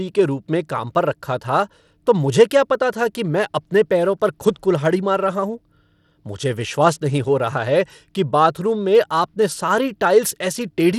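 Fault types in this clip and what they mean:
Bluetooth SBC compression: throughout this speech the treble flickers and thins with a gritty coarseness, likely from SBC at a low bit pool near 96 kbps; a spectrogram shows patchy, blocky upper bands and a hard ceiling with nothing above 16.9 kHz.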